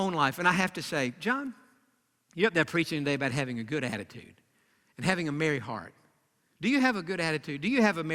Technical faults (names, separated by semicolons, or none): none